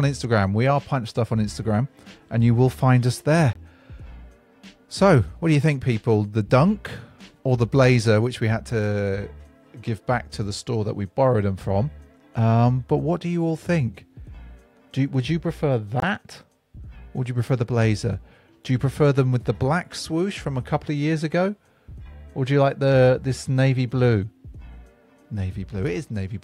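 At 3.53 s and again at 16.00 s the sound drops out abruptly for about 36 ms. That's a corrupt frame muted: damaged compressed data got rejected by the decoder and replaced with silence. Each gap's length points to a single lost frame, and timing carries on unshifted.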